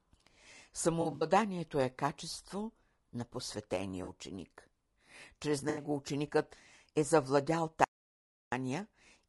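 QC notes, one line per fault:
Throughout: low-delay AAC compression. Speech sounds rough and grainy, with noise between harmonics. This fits AAC-ELD at roughly 32 kbps. Spectrogram shows smeared harmonics and a thin, synthetic-looking top band.
1.01–1.25 s, 4.03–4.10 s, 5.69–5.83 s: AAC frame loss with concealment. The decoder repeats the last good spectrum, so there are smeared, phasey patches before "е качество на" and "ученикът е завладял". On a spectrogram these appear as blurred, frozen bands. About 120 ms is lost at the first, 40 ms at the second and 80 ms at the third.
7.84–8.52 s: audio dropout to silence, about 0.68 s right after "ученикът е завладял". There is no room tone, most likely a lost input feeding zeros. The waveform shows a flat line and the spectrogram a blank column.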